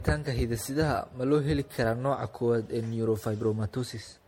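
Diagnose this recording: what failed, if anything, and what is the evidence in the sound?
The failure is at the codec stage. Throughout the speech the sound is swirly, hollow and smeared, attacks blur, and nothing is heard above 16.5 kHz. That is likely generation loss: about seven passes through a lossy encoder consistent with 64 kbit/s MP3, each requantising on a shifted frame grid. A single encode at that rate would not sound this degraded.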